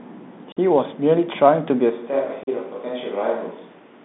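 Bluetooth CVSD headset codec damage runs through the whole of this speech recording and is plainly audible. The sound is confined to a narrow telephone-style band of roughly 150 Hz to 3.6 kHz, which fits a 64 kbps CVSD link. That codec tracks the waveform one bit at a time, nudging its estimate up or down with an adapting step, so fast, loud high content outruns it. The result here is gritty sibilance and a fine granular hiss sitting under the speech. Unconcealed Bluetooth headset packet loss punches two abrupt holes into the audio, from 0.52 to 0.57 s and from 2.43 to 2.48 s. The dropouts last about 45 ms and 37.5 ms, which suggests several consecutive packets between headset and phone went missing each time, perhaps around seven and five. Nothing was filled in to smooth them over, so each gap starts and stops with a hard edge and the speech resumes briefly subdued. A switch to a distant microphone happens suddenly at 1.92 s and lasts to the end. 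From that point the speech turns roomy and hollow and thinner in the low end. The level drops by about 5 dB, and room noise rises to about 25 dB below the speech. The likely cause is that the close headset microphone dropped out and a farther pickup took over.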